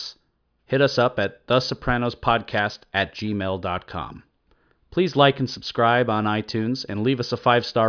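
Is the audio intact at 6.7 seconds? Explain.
Yes, at 6.7 seconds the speech is intact, with no dropout, click or other fault at that moment.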